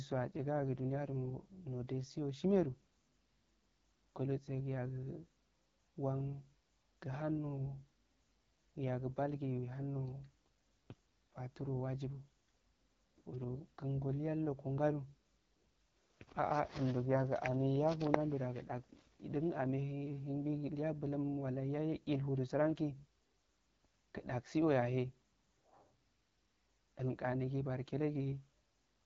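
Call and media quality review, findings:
AMR wideband (HD Voice) codec at a low mode, throughout: the pulse-driven vocal tract model lacks the bits for detail, so speech sounds rough and raspy, nothing above 7.5 kHz.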